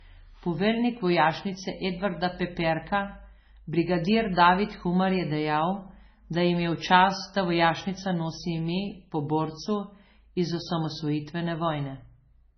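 Throughout, the speech is likely low-bitrate MP3 audio saved at a high bitrate, so nothing above 6.1 kHz returns and the first encoding's muffled, smeared artefacts remain.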